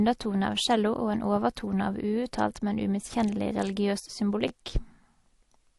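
The clip is speech with nothing above 12 kHz and a mix of mismatched compression artefacts throughout, pointing to transcoding between lossy codecs, likely MP3 then Opus. At 4.48 to 4.51 s there is a repeated buffer. An 11.61 ms piece plays twice more with hard joins, giving a brief buzz that fits a 512-sample buffer.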